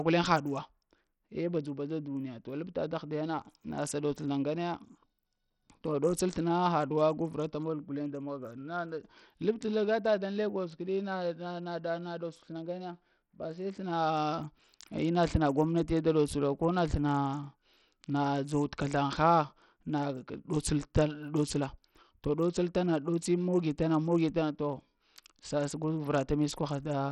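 Throughout the speech, heavy codec damage likely from Bluetooth SBC compression leaves gritty quantisation noise and flickering treble, with nothing above 16.7 kHz, consistent with roughly 64 kbps.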